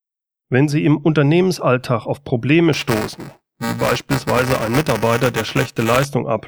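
A speech recording with a rough robotic buzz at about 345 Hz from 2.73 to 6.05 s, which is buffer tearing: each cycle, which fits a 128-sample buffer, mixes in a small slice of audio from a few milliseconds earlier.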